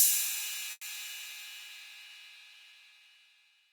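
Packets were most likely held up in transit at 0.71 s, draining the jitter buffer, a call audio freeze lasting until 0.84 s. The receiver stretched the last sound it had into a fading buzz for about 110 ms, briefly dropping to near silence for around 30 ms before fresh audio arrived. Playback then resumed exactly where it had stopped, so nothing is lost, but everything afterwards runs about 110 ms later than before.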